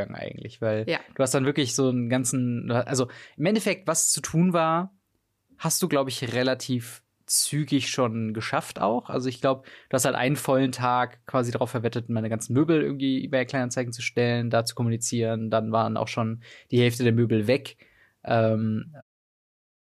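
The speech signal holds steady throughout with no audible technical faults, and the level eases smoothly away around 19 s at the very end.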